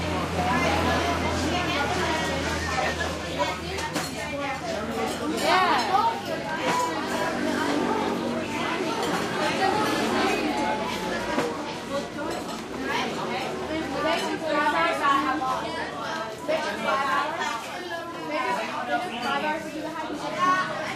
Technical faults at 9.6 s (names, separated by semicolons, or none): none